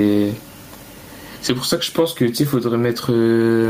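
Throughout, gain pumping: the microphone gain is likely set far too high, so a fast limiter pulls it down by roughly 15 dB on each loud moment. The room noise sits about 43 dB below the speech, which is left squashed.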